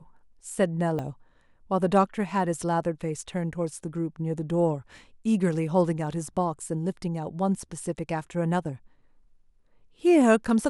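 A speech recording with a single fault at 0.99 s, where the sound jumps forward abruptly with no gap of silence, as though a short slice of about 20 ms had vanished. This is most likely a dropped buffer (overrun): the software failed to collect a block of samples before the hardware overwrote it, so the audio on either side is butted together. On a waveform this shows as a sudden discontinuity at 0.99 s, and on a spectrogram as a thin vertical broadband line.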